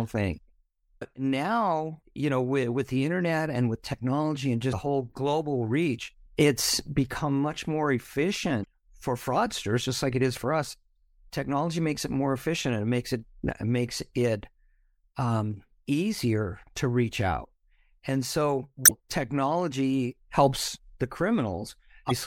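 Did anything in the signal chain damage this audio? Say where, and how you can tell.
Yes: damaged data in a compressed stream, at the codec/storage stage. Brief glitches of about 40 to 60 ms occur at 0.98, 4.69, 8.61, 18.85 and 22.07 s, for example just before "now you know with". The decoder misreads corrupt frames and resyncs at the next header, unlike dropouts, which leave silence.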